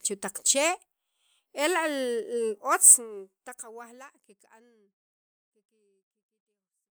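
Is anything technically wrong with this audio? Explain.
No, nothing is technically wrong with this audio, and the smooth fade-out from around 3 seconds to the end is a deliberate edit rather than a problem.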